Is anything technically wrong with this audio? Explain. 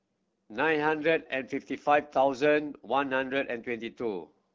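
No, nothing technically wrong stood out on listening to this speech clip, which comes through the AMR wideband (HD Voice) codec at 12.65 kbit/s.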